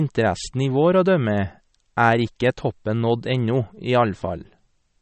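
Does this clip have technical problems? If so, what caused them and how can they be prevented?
Yes. Throughout the speech the sound is watery and swirly, with nothing above 8.3 kHz, which points to MP3 compression at a very low bitrate, around 36 kbps. The likely cause is an encoder starved of bits, cutting the treble and dropping weak frequency detail frame by frame. Encoding at a higher bitrate, 128 kbps or more, or keeping an uncompressed master, would prevent it.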